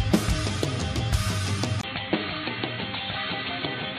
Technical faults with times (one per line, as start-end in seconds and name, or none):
1.81-3.98 input switched to a poorer device